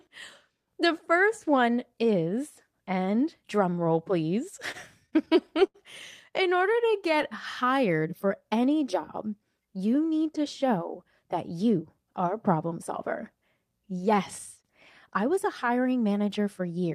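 Just after "and drum roll please", from 4.71 to 5.76 s, there are repeated stalls (stutter). Packets arrived late, so the jitter buffer kept running dry. It emptied seven times. Each time, the receiver stretched the last sound to cover the wait. The longest hold lasts 77 ms, and the holds total 147 ms, about 14 percent of the stretch. Nothing is lost. The speech drags, catches and stutters in short bursts.

From 6.58 to 7.25 s, leading into "hired for any job", come scattered short gaps. Around four single packets went missing or arrived late, spread across the span. Each hole was patched by continuing the previous sound, roughly 30 ms in all, and none is longer than about 15 ms. The stretch grows by 13 ms, with no audio dropped. The speech stays clear but picks up brief ticks and tiny smears.

Between "hired for any job" and "need to show", from 9.50 to 9.81 s, there is a jitter buffer speed-up. 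Too much audio had piled up in the buffer. To shrink the delay, the receiver cut out tiny pitch-period slices many times in a row, about 40 ms in total. The speech plays at 110 percent speed with its pitch unchanged. It sounds briefly rushed, as if the talker hurried.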